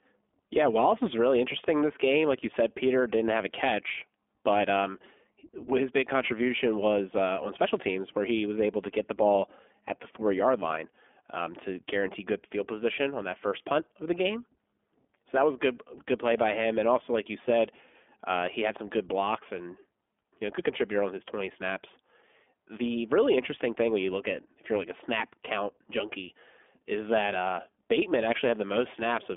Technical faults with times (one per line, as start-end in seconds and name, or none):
0.00-29.36 iLBC codec